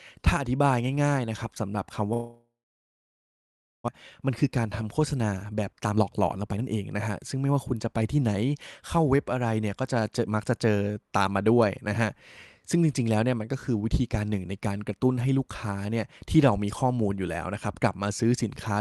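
A long network dropout runs from 2.13 to 3.90 s. The sound stretches into a fading buzz, then about 1.3 s of silence, and about a second of speech never returns. The likely cause is a long stall in arriving packets, which pushed the delay up by around 0.7 s.

A jitter buffer speed-up follows from 4.22 to 8.43 s. The receiver trims pitch-period slices to drain the excess backlog, removing roughly 0.7 s. Speech runs at 117 % speed with unchanged pitch and sounds hurried. Throughout, the call codec band-limits the audio near 12 kHz.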